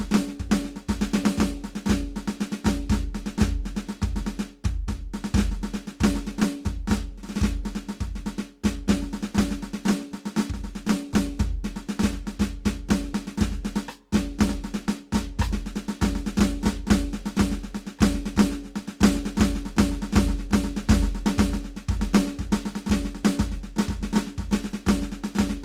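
A music recording carrying plainly audible Opus compression from start to finish, likely from the codec's CELT music mode running at a low bitrate, which fits roughly 24 kbps. Tones sound rough and grainy, with band energy preserved but detail replaced by folded or noise-filled content instead of swirling gaps. The bandwidth stays full, reaching about 20.2 kHz. A spectrogram would show few empty holes, with harmonics smeared into a speckled, noisy texture across the bands.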